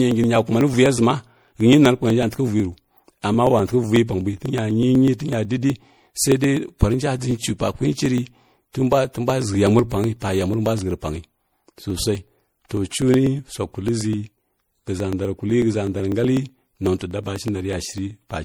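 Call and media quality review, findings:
Generation loss, whole clip: swirly, smeared, hollow speech, blurred attacks, worse than one low-rate encode would give. Likely several MP3 passes, sounds like about four at 64 kbit/s. Each re-encode lands on a shifted frame grid, so quantisation noise and spectral holes stack up.

Periodic USB or driver dropouts, 0.11 s to 18.35 s: steady ticks every 0.124 s, around 150 in total. Each is roughly a millisecond of audio skipped, not filled with silence. Points to a background task stalling the USB bus or audio driver on a fixed interval.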